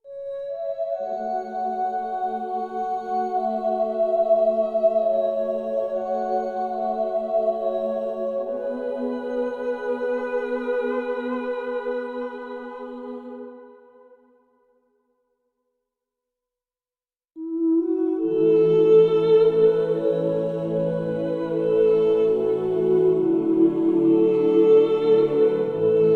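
No technical faults can be heard anywhere in the audio. At no point does anything in the signal chain draw attention to itself.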